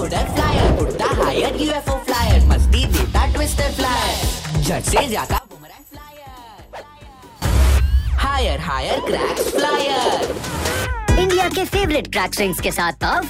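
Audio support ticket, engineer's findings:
Level collapses by about 20 dB from 5.38 to 7.42 s, leaving a faint residue. Likely cause: one channel inverted in polarity. Common content cancels when channels sum to mono. Only the inter-channel difference survives. Check polarity in the stereo path.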